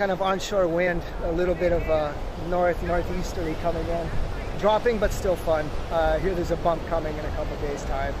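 A short, sharp blip cuts through the sound at 0.86 s, over almost as soon as it starts. It comes from damaged data in the compressed stream: corrupted bytes there make the decoder misread the frame, lose sync, and hunt for the next valid frame header before playback continues.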